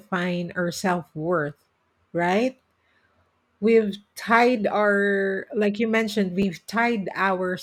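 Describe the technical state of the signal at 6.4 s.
New audio arrived late at 6.42 s, after "our like you mentioned," so a repeated buffer replayed the last 10.7 ms block, heard as a click or brief buzz.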